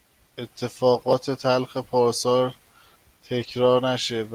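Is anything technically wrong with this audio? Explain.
Yes. From 3.43 to 3.49 s there is a lost packet rebuilt from error correction. About 40 ms of speech, which fits two 20 ms packets, was replaced by the low-bitrate copies carried in the following packets. There is no gap, but that stretch sounds rougher and noisier.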